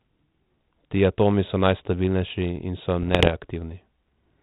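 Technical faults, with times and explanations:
3.02 to 3.29 s: bit errors on an ADPCM link. A short stretch of the speech breaks into pops and rough, grainy bursts, with the level jumping briefly up and down. A small share of bits, around half a percent, arrived flipped. Each wrong bit throws off the decoder's adaptive step size and its prediction, so the damage does not stay on one sample but rings on for a few milliseconds. The link sounds like 32 kbit/s G.726, band-limited below 4 kHz.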